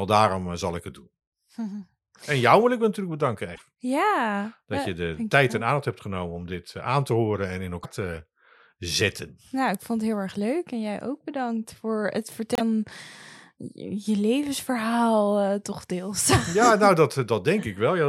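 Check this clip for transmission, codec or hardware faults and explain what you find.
Three short dropouts in the speech at 3.54–3.61 s after "wil ik natuurlijk bedanken", 7.83–7.86 s between "te horen en in" and "te zetten", and 12.55–12.61 s after "ook bedankt voor het". Each jumps ahead, likely a broken MP3 bit reservoir: after lost frames of about 26 ms, the next frame pulls bytes that belong to another frame. On a spectrogram, each shows as a vertical smear of broadband noise or a brief gap. The waveform shows a discontinuity.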